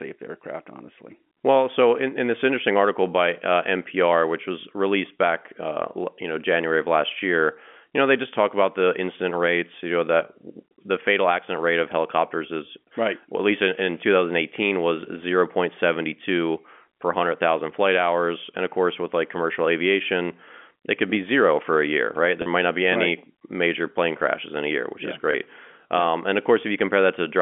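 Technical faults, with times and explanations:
22.42–22.46 s and 25.32–25.34 s, packet loss with pitch repetition: gaps of 40 ms (after "for a year right", before "might not be any") and 20 ms (after "year which yeah is") are bridged with a briefly held, buzzy tone rather than clicks or silence. This fits two 20 ms packets and then one lost over the band-limited G.711 line, with the last pitch period repeated to cover each gap.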